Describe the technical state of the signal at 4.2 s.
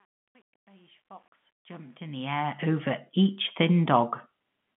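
At 4.2 s the audio is intact, with the narrow telephone band of G.711 coding passing nothing above about 3.7 kHz and no fault present.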